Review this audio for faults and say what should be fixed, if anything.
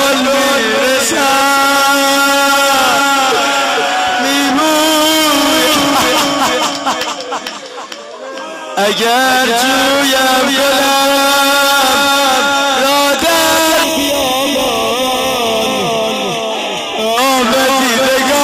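From 13.84 to 17.18 s the sound turns hollow and phasey, with a scooped tone. This is channel delay (comb filtering): one channel lags by roughly a third of a millisecond, and summing to mono cancels evenly spaced frequencies, the first near 1.5 kHz. Keep both channels time-aligned, or check mono compatibility, before summing.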